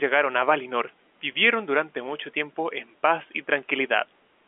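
No technical faults can be heard in this speech.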